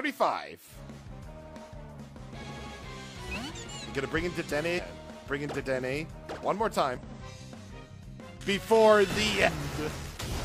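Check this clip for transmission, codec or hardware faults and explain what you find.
The clip has one kind of fault, heard four times. Damaged data in a compressed stream occurs at 1.91–1.96 s, 4.74–4.80 s, 6.97–7.03 s and 9.43–9.49 s. Corrupted bytes in the encoded stream leave the decoder unable to read those frames properly, so it loses sync and hunts for the next valid frame header. Each event is a short chirp or blip of about 50 to 60 ms.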